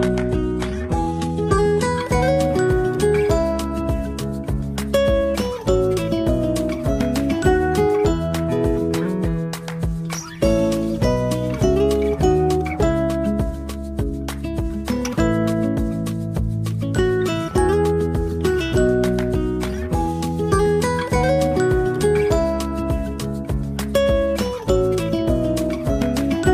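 For the first 2.0 s there's an adaptive stream starting at a low bitrate. The player opened on a cheap rendition to start quickly, so nothing sits above 11.8 kHz, the top end sounds synthetic and smeary (pointing to HE-AAC around 16 kbit/s), then it jumps cleanly to fuller AAC-LC-like quality.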